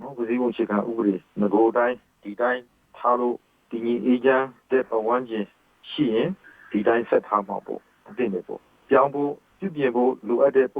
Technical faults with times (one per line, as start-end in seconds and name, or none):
0.00-10.80 channel delay (comb filtering)